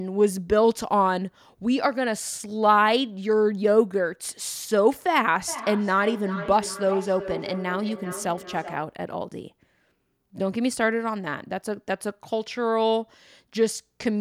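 A second device on the same call replays this speech into the microphone, causing feedback echo between two devices from 5.48 to 9.02 s: repeats roughly every 0.4 s, peaking about 12 dB below the speech.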